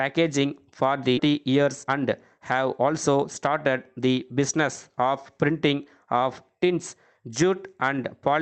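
At 1.17 to 1.19 s the audio makes a skip ahead. About a second of sound is simply missing, and the two sides are butted together with no fill. The waveform shows an abrupt splice, and the spectrogram shows a hard vertical seam where the two sides meet.

Jitter buffer speed-up follows from 1.27 to 1.98 s at about 113% speed, then from 2.38 to 4.08 s at about 106%. Each pass trims roughly 100 ms of short pitch-period slices, so the sound hurries while its pitch stays put. Harmonic lines keep their spacing on a spectrogram, but events arrive compressed in time, and the waveform shows tiny cycle-level joins.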